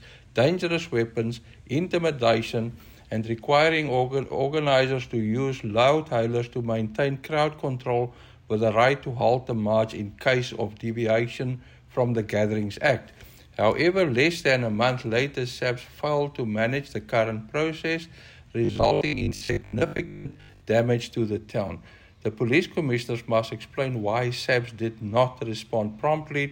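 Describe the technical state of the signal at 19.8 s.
At 19.8 s the signal is inside a stretch of robotic sound from repeated short buffers, running from 18.65 to 20.61 s. Fresh audio is likely arriving too slowly, so a segment of about 20 ms is replayed while about half of the real material is skipped. The loop imposes a rigid, metallic 50 Hz buzz. Unlike steady mains hum at the same pitch, this buzz rises and falls with the underlying sound and ends at 20.61 s.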